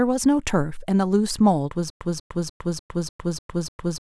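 At 1.90 s the speech breaks into a stutter with silent gaps that lasts to the end. A 0.19 s fragment repeats seven times, each followed by about 0.11 s of digital silence, every 0.30 s. The stream likely stalled and replayed its last fragment. The audio after 1.90 s is lost.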